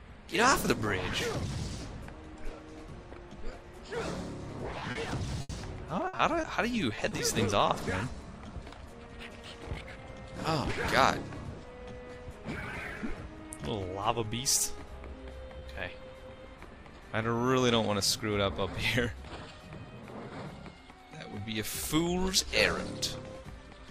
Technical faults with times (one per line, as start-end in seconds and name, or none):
4.79-7.13 repeated packet loss (robotic sound)
14.29-14.33 short concealed packet loss
15.59-15.63 short concealed packet loss